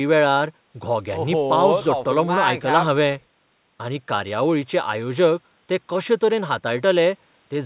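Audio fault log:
No faults heard anywhere in this speech recording.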